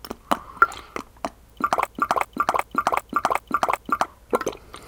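From 1.87 s to 4.06 s, a broken-record loop: a 0.38 s fragment of the sound repeats six times, identical and back to back, likely because playback or the stream stalled on its last fragment. Unlike an echo, the repeats never fade, and the intervening audio is simply lost.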